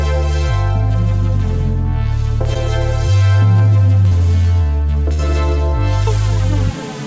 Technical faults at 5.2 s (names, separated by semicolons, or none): burst of packet loss